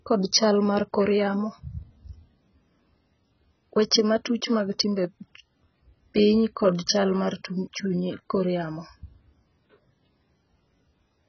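Heavy AAC compression is the likely cause of the damage running through this speech clip from start to finish. The encoder appears to have been starved of bits, which fits a very low bitrate of around 12 kbps. It discarded everything above 6.2 kHz and coarsely quantised what remained. The speech therefore sounds dull and muffled, with a smeared, warbling texture on sustained sounds and fizzy, unstable sibilants where spectral holes and substituted noise replace the lost detail.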